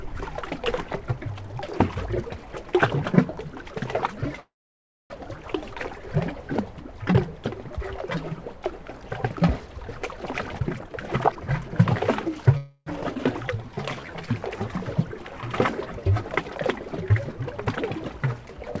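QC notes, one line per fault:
4.40–5.12 s, call audio freeze: the sound hangs for 0.7 s, a brief fading tail and then mostly silence before resuming where it stopped. Likely packets stalled and the jitter buffer ran dry.
10.33–12.44 s, jitter buffer speed-up: the sound runs at about 128% speed with its pitch unchanged. The buffer was trimming tiny pitch-period slices to shed roughly half a second of excess delay.
12.57–12.88 s, call audio freeze: this is a shorter stall of about 0.3 s. The last sound is stretched into a quick fading buzz and then picks up again with nothing lost.
13.14–13.17 s, skip ahead: playback jumps forward, cutting out around 150 ms of sound, and the two sides butt together almost seamlessly.
13.58–14.57 s, jitter buffer slow-down: the sound drags at about 87% speed with the same pitch. Repeated pitch periods pad in 136 ms to rebuild the buffer's reserve.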